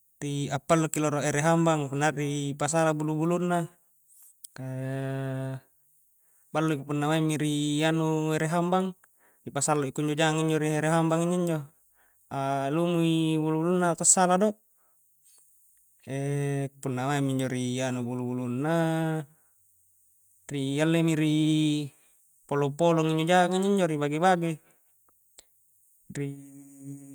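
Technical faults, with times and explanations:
No technical faults are audible anywhere in this speech recording.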